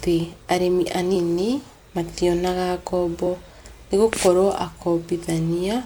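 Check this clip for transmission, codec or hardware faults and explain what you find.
Two brief skips show up in the speech, both compressed frames skipped. At 1.14 s the audio jumps ahead by roughly three 26.1 ms frames, about 70 ms, and at 3.26 s by about one frame. Each missing or rejected frame is passed over, so the audio jumps ahead by the length left out. Unlike a dropout, there is no silent gap, just a sudden step forward.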